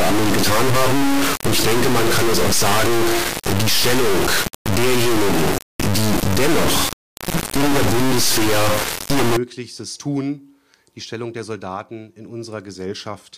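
From the start to 9.37 s the audio is an extremely loud, buzzing square wave that drops out to silence in the quietest moments. It is an integer read as float fault, which fits 32-bit integer samples decoded as 32-bit float, throwing values to near zero or full-scale clipping.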